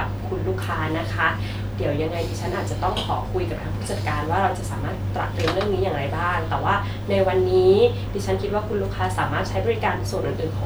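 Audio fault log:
No faults are present.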